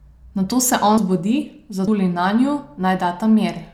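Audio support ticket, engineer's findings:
Audio missing between chunks at 0.98, 1.88 and 2.78 s: speech skips forward abruptly, with no gap, roughly a tenth of a second gone each time. Evenly spaced jumps likely mean the recorder or processor drops audio at each 1.0 s chunk boundary.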